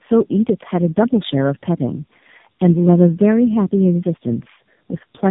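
Throughout the whole recording, the call has passed through tandem speech coding. The sound points to three low-rate speech coders in series, probably a G.729-type stage followed by two AMR-NB stages, joined by ordinary 64 kbit/s telephone links. Each coder re-encodes the previous one's degraded output, so the errors stack. The result is rough, muffled and warbly speech, with nothing above 3.8 kHz.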